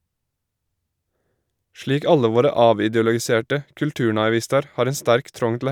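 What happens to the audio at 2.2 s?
Nothing goes wrong at 2.2 s; the speech carries on intact through that moment with no dropout, click, distortion or other fault.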